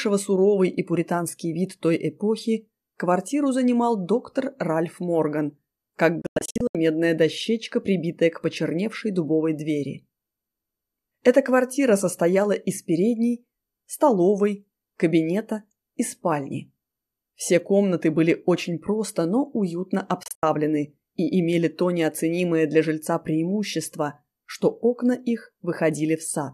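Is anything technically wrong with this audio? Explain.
Yes, two digital broadcast dropouts. At 6.22 to 6.75 s, and again at 20.23 to 20.43 s, the receiver lost the signal or rejected corrupted frames and muted until clean frames returned. Within 3 ms fades, the sound breaks into several short holes: about 312 ms missing across 528 ms (longest gap 96 ms) in the first event, and 120 ms across 192 ms (longest 72 ms) in the second. The missing audio never comes back.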